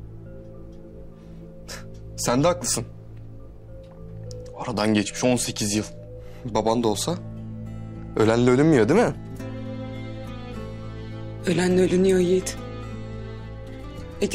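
No technical faults can be heard anywhere in the clip.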